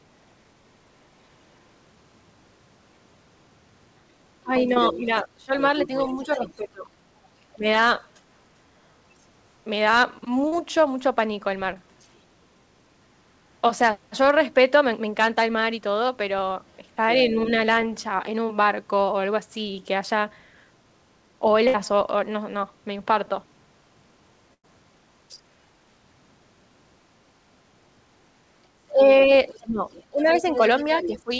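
From 4.44 to 7.67 s the speech is suppressed in double talk: over about a second and a half in total it dips by up to about 20 dB, dulls and breaks up. The likely cause is an echo canceller unable to separate the local talker from loudspeaker echo, so it turned both down. On the waveform this shows as sudden notches in the envelope.

From 4.59 to 8.21 s the other side's voice leaks through at about 10 dB below the main speech. It is likely residual loudspeaker echo. On the spectrogram it appears as a second, fainter set of harmonics under the main ones.

Short concealed packet losses occur at 4.74, 10.48 to 10.54, and 11.74 to 11.78 s, with gaps of 20 to 40 ms. Each one is filled by extending the previous sound and is heard as a brief smear or wobble. On the spectrogram each shows a tiny stretch of continued sound.

Faint leaks of the other side's voice return at 12.01 to 12.08 s (about 40 dB down) and 17.11 to 17.26 s (about 20 dB down).

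Bursts of packet loss at 21.68 to 21.76 s and 24.54 to 24.65 s remove about 60 and 100 ms. Each is heard as a held buzz or fading hiss, after which the audio jumps ahead. The waveform tapers into each gap.

From 28.91 s to the end, suppression returns, again up to about 20 dB, with leakage about 10 dB down from 29.48 to 31.21 s. Above all of this the spectrogram stays empty beyond 8 kHz, consistent with the G.722 call codec.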